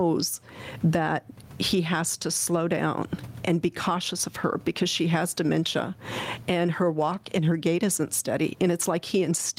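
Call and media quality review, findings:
Gain pumping throughout the speech. Swing of around 20 dB. Dynamics squashed. Likely cause: input gain far too high, with a fast limiter clamping each peak. Room noise, about 44 dB below speech.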